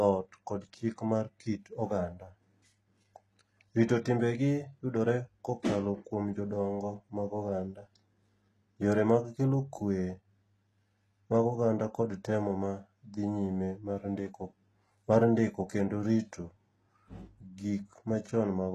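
Throughout the speech, the treble sounds synthetic: likely HE-AAC compression at a very low bitrate, rebuilding highs that stop near 12.4 kHz, leaving sibilants gritty and lispy.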